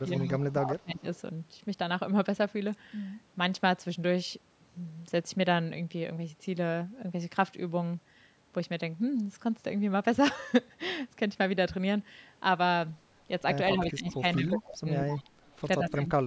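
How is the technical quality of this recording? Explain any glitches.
The speech is marred by two related call-path faults, each clustered near the start and end of the clip. The call microphone processing caps the audio with nothing above 8 kHz.

Speech suppressed in double talk occurs at 0.0–1.05 s, 13.74–15.11 s and 15.8–16.26 s. When both sides spoke at once, the echo canceller likely could not tell the near talker from loudspeaker echo and turned everything down. The speech dips by about 20 dB in the first two spans, for roughly 0.7 s in each. In the final span it sinks by about 35 dB, roughly 0.4 s.

Echo leak appears at 0.12–0.4 s, 0.99–1.19 s and 13.9–15.99 s. A delayed copy of the voice trails it by 177 ms, because the far end's echo canceller, on a likely speakerphone, failed to remove all of what its microphone picked up. The copy sits about 15 dB below the speech in the first and third spans, and about 30 dB below in the second.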